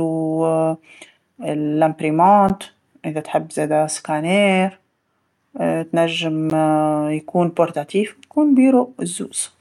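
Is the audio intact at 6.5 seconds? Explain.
No. At 6.50 s there is a gap between chunks: the speech is delivered in 4.0 s chunks, and a 13 ms silence sits at this join. Nothing is lost, but the sound is interrupted by a short hole.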